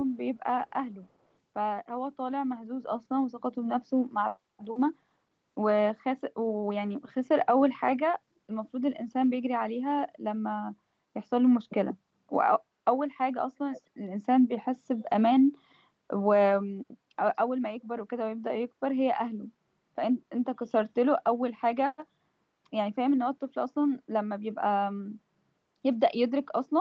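At 13.72 to 13.82 s, a faint, brief repeat of the speech surfaces, trailing the original by roughly 0.24 s and sitting well below it, around 20 dB down, so it reads as a ghostly scrap rather than a clear second voice. This is an echo leak, likely from a far end playing the call over a loudspeaker whose echo canceller let a fragment of its own microphone pickup slip back into the call.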